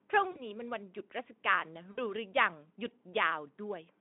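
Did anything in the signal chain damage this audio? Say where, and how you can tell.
Yes, at the network stage: VoIP packet loss concealed by the speech codec, at 0.31–0.48 s and 1.91–2.01 s. About 40 ms and 60 ms of audio went missing, and the decoder filled each gap by repeating its last pitch and filter with falling gain. That gives a buzzy, fading smear that stays weak past each gap. The Speex narrowband decoding itself sounds lightly coloured.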